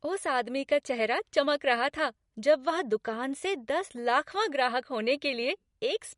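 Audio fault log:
Throughout: MP3 compression. Nothing reaches above 11.2 kHz, and the speech has a plainly audible watery, swirling texture with smeared onsets, likely from an MP3 encoder short of bits that cut the treble and let weak spectral lines flicker between frames, which fits roughly 48 kbps.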